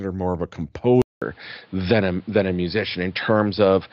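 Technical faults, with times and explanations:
1.02–3.93 s: input switched to a poorer device. After "more of a", the sound drops out for 200 ms, then returns capped at 5.3 kHz, with a fresh noise floor about 35 dB down at much the same level. The gap and new noise point to a likely device change rather than simple filtering.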